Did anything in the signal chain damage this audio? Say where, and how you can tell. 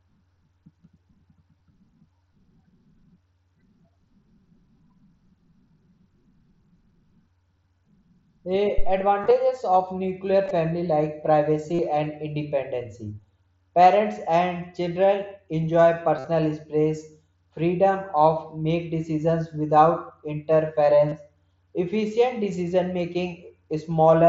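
Yes. A deep thump lands at 8.78 s and has died away by 8.97 s, decaying in about 42 ms. This is a phantom power thump in the analogue wiring: a supply switched on a live input sent its voltage step through the coupling capacitors.

Short buzzy, held stretches with a slight warble on recovery occur at 9.21, 10.45, 11.74, 16.17 and 21.09 s, lasting 30 to 67.5 ms. The worst, at 16.17 s, holds for 52.5 ms. This is concealed Bluetooth headset packet loss on the wireless link, with missing packets patched by repeating recent waveform.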